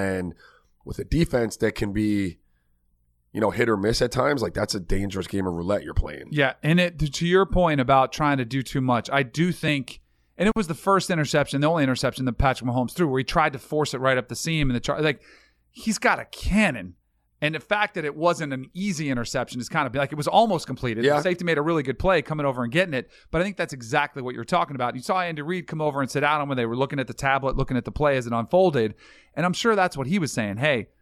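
No technical faults can be heard anywhere in the recording.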